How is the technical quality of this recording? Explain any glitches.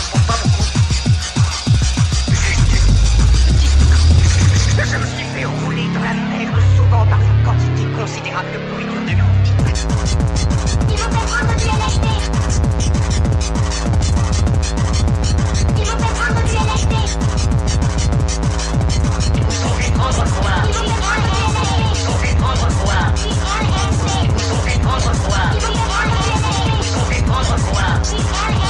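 No glitches or technical faults are audible anywhere in the recording.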